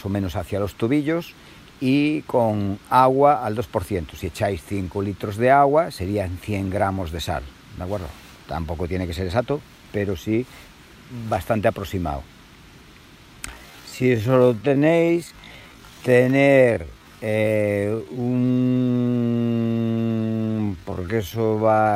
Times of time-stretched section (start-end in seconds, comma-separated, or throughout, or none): 13.48-21.96